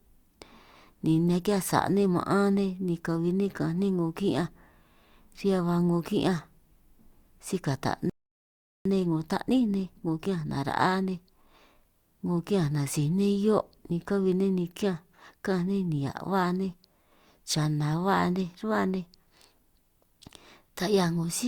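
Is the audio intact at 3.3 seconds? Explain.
Yes, the speech at 3.3 seconds plays through intact, with no fault at that moment.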